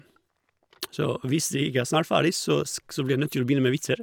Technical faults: none

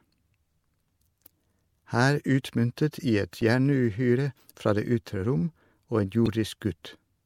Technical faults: damaged data in a compressed stream

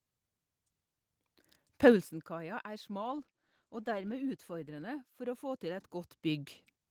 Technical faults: zipper noise; call bitrate drop

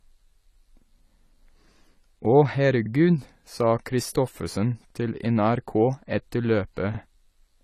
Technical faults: AAC compression; overlapping chunks

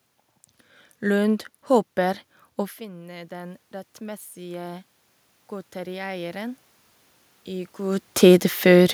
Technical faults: automatic gain rising

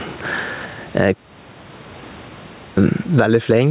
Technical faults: gain pumping

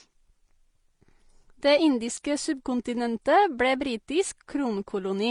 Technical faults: transcoding between lossy codecs

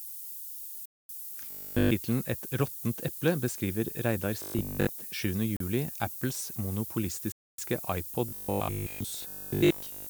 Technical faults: low bit depth with noise shaping; Bluetooth stall; robotic sound from repeated short buffers

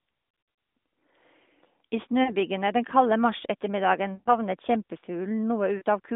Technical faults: lost AMR speech frames

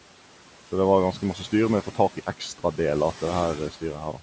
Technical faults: noise suppressor artifacts; speech cut by the noise suppressor

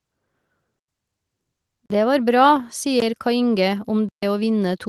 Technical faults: block of digital silence

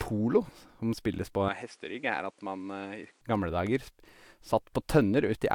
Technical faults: input switched to a poorer device

